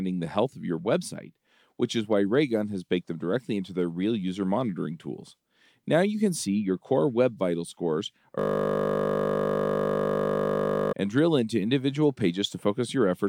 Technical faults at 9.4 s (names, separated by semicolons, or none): system hang loop